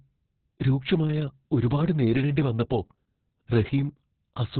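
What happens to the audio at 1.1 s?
At 1.1 s the speech carries the same heavy Opus voice compression that runs through the whole clip. Nothing is present above 4.4 kHz, so the sound is narrowband and muffled, and the coarse coding of the excitation in SILK's linear-prediction model makes it hoarse and slightly robotic, which fits a bitrate around 6 kbps. Unlike a plain low-pass filter, which only dulls the sound, this adds a grainy, synthetic roughness.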